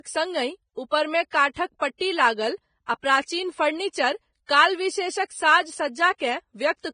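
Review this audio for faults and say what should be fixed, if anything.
Throughout the speech, treble above 9.7 kHz is missing and the upper band sounds hissy and grainy. This is likely heavy Vorbis compression at a bitrate of roughly 20 kbps. Unlike a plain low-pass, the remaining treble is replaced by noise. Encode at a higher Vorbis quality setting, or keep a lossless master.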